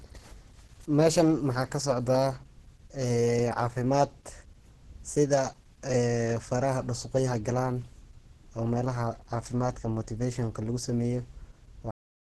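From the start the speech sounds muffled, hoarse and grainy, with a rough, noisy texture on voiced sounds and nothing above 12.1 kHz. This is likely heavy Opus compression in its hybrid speech mode, at a rate that fits roughly 12 kbps, where starved bands are filled with noise instead of real detail.

At 11.91 s the audio stops abruptly in the middle of a sound and falls straight to digital silence with no decay, which lasts to the end. This cut-off end means the final buffers were never written or played out.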